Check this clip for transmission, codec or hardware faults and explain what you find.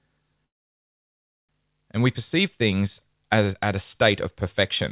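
One fault stands out, a call audio freeze. At 0.46 s the speech halts and the stream goes almost completely silent for about a second, resuming at 1.51 s exactly where it left off, with nothing skipped. The likely cause is packets stalling in transit so the jitter buffer ran dry. The receiver padded the wait, pushing everything after it roughly 1.03 s later. The band-limited sound, with nothing above 4 kHz, comes from the G.711 call path.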